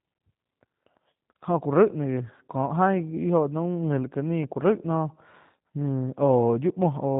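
Throughout, the speech has plainly audible G.729 codec damage: nothing above 4 kHz, and a rough, synthetic texture that fits an 8 kbit/s G.729A coder.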